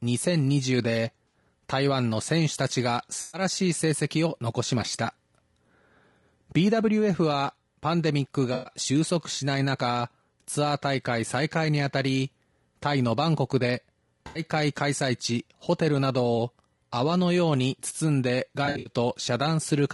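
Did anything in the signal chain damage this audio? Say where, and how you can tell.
Yes. Codec stage: the speech sounds rough and grainy throughout, with noise between the harmonics. That points to likely low-delay AAC compression at a low bitrate, consistent with about 32 kbps.

Network stage: AAC frame loss with concealment leaves smeared, noisy patches at 1.28 s (60 ms), 3.21 s (120 ms), 8.53 s (120 ms), 14.27 s (80 ms) and 18.65 s. In that last one, 160 ms of loss is scattered over 200 ms, with the longest run about 70 ms. The decoder patches each gap from the last good spectrum.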